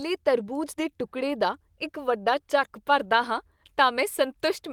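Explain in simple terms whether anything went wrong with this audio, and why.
Nothing went wrong here: the speech comes through with no dropouts, clicks, distortion or glitches at any point.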